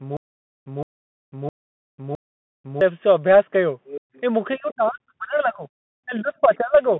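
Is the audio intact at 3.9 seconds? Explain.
No. At 3.9 seconds a second voice is leaking through: from 3.85 to 4.2 s another talker sits faintly under the speech, roughly 15 dB below it. The likely cause is the far end of a call playing on the talker's loudspeaker and reaching the microphone past an echo canceller that did not fully remove it.

The moment also carries the Bluetooth CVSD headset codec that runs through the whole clip. Here the sound is coded one bit per sample, up or down, with an adapting step size, which fits a 64 kbps narrowband headset link. Nothing above about 3.9 kHz comes through, the usable band sits roughly between 150 Hz and 3.5 kHz, and there is a grainy hiss underneath. Loud high-frequency sounds turn scratchy because they outrun the step size. That slope-overload grit separates it from plain low-pass filtering or ordinary packet-loss artefacts.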